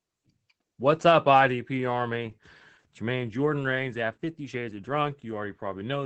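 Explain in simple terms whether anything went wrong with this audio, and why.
Yes. The whole clip carries Opus voice compression: squeezed hard, the speech loses its crisp top end and sounds muffled, slightly hoarse and a little robotic throughout.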